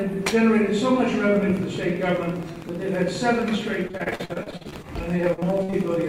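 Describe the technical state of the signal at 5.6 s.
At 5.6 s two faults overlap. A train of clicks runs from 1.36 s to the end: regular ticks at 15 per second, peaking about as loud as the sound itself, likely interference from nearby equipment or a faulty connection or power supply, and audible even in pauses.

It sits on top of repeated packet loss (robotic sound), from 3.87 to 5.75 s. Around twenty holes, the longest 54 ms, get patched by stretching the previous sound, and that concealment covers about 28% of the stretch. The result is choppy, with bits missing.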